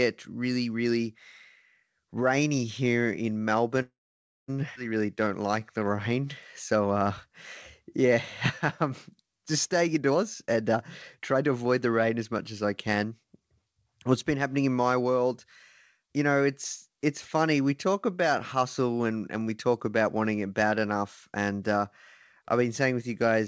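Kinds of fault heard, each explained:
Call audio freeze: after "rainy here in" the sound stretches into a fading buzz, then about 0.56 s of silence, likely from late packets; unlike a skip, nothing is lost.
Skip ahead: at 4.76 s roughly 0.4 s of audio vanishes and the two sides join almost seamlessly, so material is missing rather than merely delayed.
Jitter buffer slow-down: four stretches between 5.01 and 9.53 s run at 85 to 92% speed with repeated pitch periods, sounding drawn out at unchanged pitch, with no silent gap.
Jitter buffer speed-up: from 9.76 to 13.41 s, trimmed pitch periods push the sound to 133% then 112% speed, hurried at the same pitch, spread out rather than one abrupt jump.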